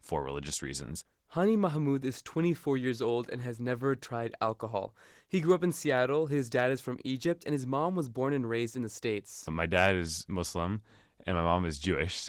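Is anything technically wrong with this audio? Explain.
Yes. Opus voice compression runs throughout the speech. In hybrid mode, a linear-prediction coder handles the band below 8 kHz and a transform layer codes the top in 20 ms frames. Coarse excitation coding makes the voice plainly hoarse and slightly robotic, which fits roughly 16 kbps.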